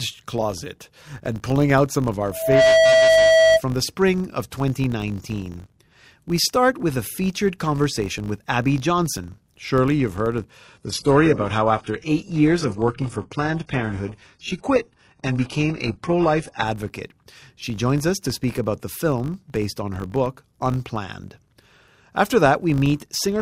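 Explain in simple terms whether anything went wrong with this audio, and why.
Several things went wrong. A low 50 Hz buzz runs through the whole speech clip. This is a filter restarted on every block. The filter forgets its settings at each short chunk of audio, so every chunk starts with a tiny click, and the clicks merge into a buzz that gets louder with the voice.

After "out some of our", at 2.31 s, a loudspeaker feedback squeal appears. The microphone is picking up its own loudspeaker. A 650 Hz tone builds in about a third of a second, rises above the voice, and lasts until 3.62 s, just before "the spring of".

After "you've heard of", from 10.65 s to 16.65 s, the sound suddenly becomes duller and more artificial. This is an adaptive stream at a lower bitrate. The connection slowed, so a lower-quality version played, with nothing above 11.5 kHz.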